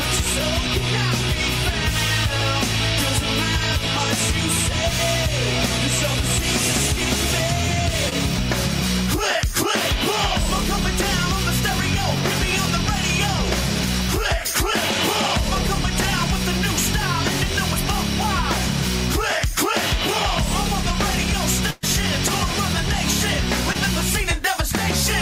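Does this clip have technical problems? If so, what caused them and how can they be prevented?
Yes. Short concealed packet loss at 8.09–8.13 s and 23.73–23.76 s: roughly 20 ms never arrived and was patched by extending the preceding sound, seen as a brief smeared spectrogram column. Sending redundant audio or forward error correction would let the receiver rebuild such small gaps.

A burst of packet loss at 21.70–21.85 s removes 120 ms. The decoder stretched the last sound and faded it, leaving flat, decaying bands and a dipping waveform envelope. A steadier network path and a larger jitter buffer would keep consecutive packets from arriving too late.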